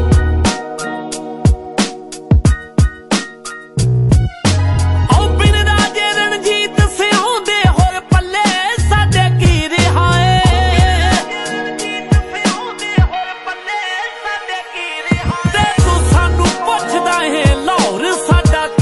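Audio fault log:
Throughout, MP3 compression: the codec damage is plainly audible, with a watery, swirly quality, the sort of thing you get when the encoder is starved of bits, likely at around 48 kbps. Weaker high-frequency detail keeps flickering in and out from frame to frame, and any sharp edges come through smeared rather than crisp.
4.10 s, pre-echo: just before an attack there's a brief hiss, about 19 ms of it, sitting roughly 13 dB above the quiet that should be there. The noise meant to be masked by the loud hit gets spread across the whole transform block, about 48 ms here, so it leaks into the gap ahead. Short blocks never kick in, so the attack lands soft and blurred.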